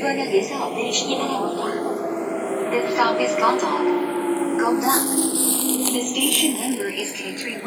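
A short recording of sounds with channels drifting apart the whole way through. The left and right come from separately clocked devices, roughly 100 ppm apart, so the inter-channel delay creeps out to around half a millisecond, and in mono the comb notches sweep slowly, giving a slow flanging.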